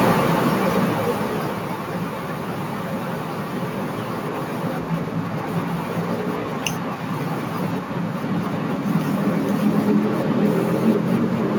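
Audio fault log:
0.05–1.89 s, automatic gain falling: the speech starts loud and then sinks by about 10 dB, the background dropping right along with it. The automatic gain control judged the opening input too hot or its background noise too strong and eased its gain down gradually over these two seconds.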